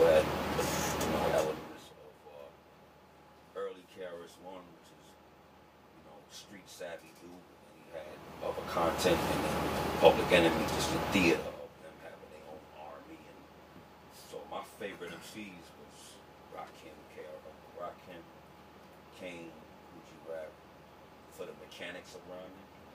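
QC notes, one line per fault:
No faults to log in this clip. Where the level changes, it eases smoothly up or down, the way a fader would move it.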